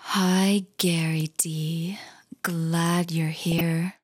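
From 3.52 to 3.61 s a brief patch of noisy blips and level jumps breaks through the sound. This is DAB burbling: weak reception lets a small share of bit errors, somewhere around a fifth of a percent, slip past error correction into the MP2 audio stream. Corrupted samples put short blips of noise in single sub-bands, and corrupted scale factors make sub-bands leap in level for up to a frame, and nine frames were hit.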